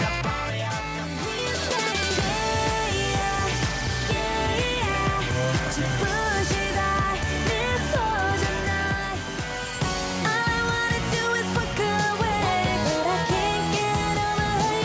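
Nothing here stands out as a fault: the sound has simply come through a call's microphone processing, which trims the deepest bass and leaves nothing above 8 kHz, and that's just how such a path normally sounds.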